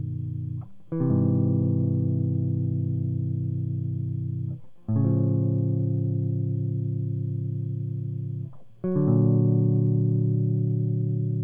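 Two independently clocked devices likely drifted apart by something around 400 parts per million in this music clip, so a single sample is dropped or repeated each time the gap grows to a full sample. These clock slip clicks run from 0.11 s to 11.41 s, about twenty per second and some two hundred in all. They sound like a faint, steady ticking that blurs into a soft rattle, most exposed on loud, bright or held passages.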